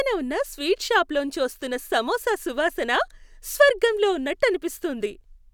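No technical faults are audible.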